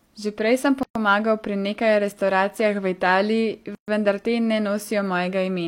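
Two short dropouts break the speech. The first runs from 0.83 to 0.95 s, a silence of about 123 ms. The second runs from 3.75 to 3.88 s and lasts about 130 ms. Both are gaps at a join of encoded pieces. The audio was encoded in separate chunks and stitched back together without trimming, so the encoder's start-up delay and the padding on the last frame of each chunk were left in. You hear the speech cut off, with the edges smeared by the codec, and then pick up again right where it stopped.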